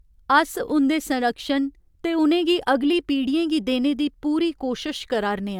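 No technical faults are audible.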